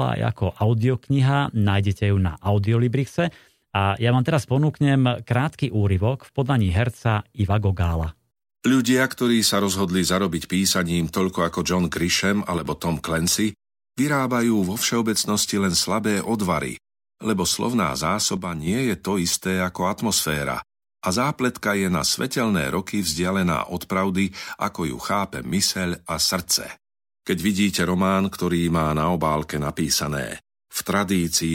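At 12.58 s the speech abruptly drops by about 6 dB, holds there until 12.66 s, then snaps back. It happens again from 18.37 to 18.67 s, between "slabé odvary lebo slovná" and "je to isté". Both sound like one channel dropping out, likely one stereo side going dead. In the mono sum, the shared centre content loses half its contribution, and anything carried only on that side disappears for those moments.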